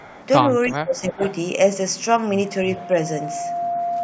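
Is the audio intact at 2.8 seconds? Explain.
No. A loudspeaker feedback squeal runs from 2.45 s to the end. The microphone picks up its own loudspeaker, and at 697 Hz the loop gain exceeds one. A steady tone swells over about a second to just below the speech level.

A faint, delayed copy of the speech also surfaces from 2.77 to 2.86 s, trailing the original by 334 ms. This is likely an echo leak, where the far side's echo canceller let its loudspeaker pickup slip back into the call.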